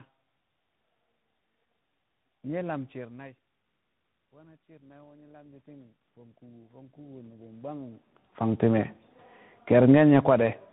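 Tandem speech coding runs through the whole clip. The audio passed through two speech codecs in a row, probably AMR-NB and then CVSD. Each one recoded the other's damaged output. Nothing is left above 3.8 kHz. The speech sounds muffled, rough and warbly.

From 4.33 to 8.72 s, the automatic gain rises. The input level dropped by about 22 dB, as the talker moved around 3 s. The gain control slowly added about 19 dB. Voice and room noise swell together over several seconds.

From 9.57 to 10.44 s, the automatic gain falls. The input had become too loud for the gain. The control pulled the gain down by about 6 dB. The sound starts loud, then sinks along with its background.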